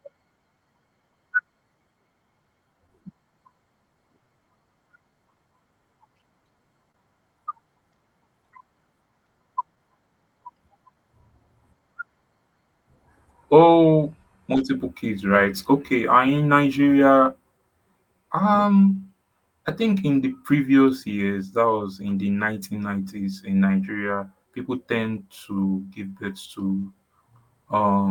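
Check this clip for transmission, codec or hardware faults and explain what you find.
The speech carries two linked timing faults and three clusters of brief concealed dropouts. It passed through an Opus call path whose top end stops near 12 kHz, consistent with a moderate call bitrate.

Clock drift between sender and receiver runs through the whole clip. The sender's clock is about 1% slower than the receiver's, so the jitter buffer keeps draining. The result is small timing hiccups recurring at uneven intervals rather than one obvious break, which is what separates it from a single network stall.

Repeated timing corrections run from 0.13 s to 27.79 s. To avoid running dry, the receiver stretches the audio, repeating small slices and playing at about 99% speed. In total that adds roughly a fifth of a second. Any audible trace is slight hiccups spaced unevenly, all lengthening and never clipping, unlike random loss.

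Scattered short gaps come in three clusters. Between 2.87 s and 9.79 s there are about four, the longest around 30 ms. Between 13.72 s and 17.04 s there are about three, all very short. Between 22.10 s and 23.76 s there are about three, the longest around 10 ms. Each lost or late packet was bridged by extending the preceding sound, so these show up as tiny ticks or smears rather than silences. They are confined to those spans, which distinguishes them from the clip-wide drift edits.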